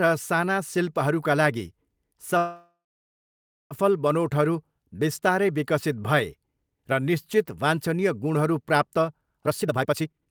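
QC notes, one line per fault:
2.37–3.73 s, call audio freeze: the last sound is carried on as a fading buzz or hiss and then about 0.93 s of silence before the speech resumes where it stopped, likely from delayed packets draining the jitter buffer. About 1.33 s is inserted, nothing lost, and playback falls that far behind.
9.46–10.30 s, jitter buffer speed-up: speech plays at about 174% speed with pitch unchanged and sounds hurried, because the receiver repeatedly cut short pitch-period pieces to shed roughly 0.7 s of excess buffered delay, compressing the closing stretch.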